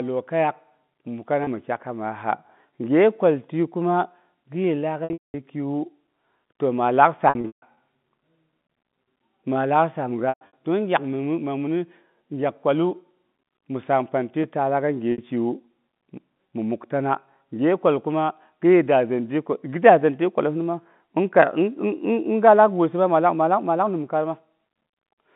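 Packet loss with pitch repetition occurs at 1.44–1.47, 5.04–5.34, 7.29–7.77, 10.29–10.53 and 15.12–15.18 s. Each gap is bridged by repeating the last pitch period. The 30 ms loss is a brief buzzy hold, while runs up to 210 ms fade toward silence before the sound cross-fades back. A plain dropout would cut straight to silence instead.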